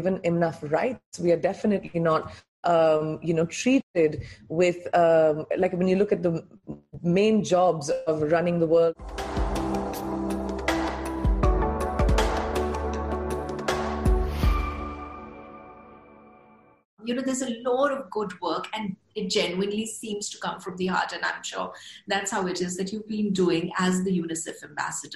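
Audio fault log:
No fault is audible anywhere in this recording.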